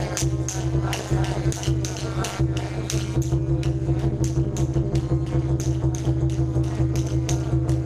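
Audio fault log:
Throughout, overlap-add ripple. The sound was split into windowed frames and rebuilt with an overlap whose window gains do not add up to a steady level. So the loudness swings once per frame, around 200 times a second. The swing is deep, about 60 dB, nearly silencing the signal at each trough. At that rate the ear hears a harsh, metallic buzz rather than separate dips. It gives a metallic buzz with extra tones around each note.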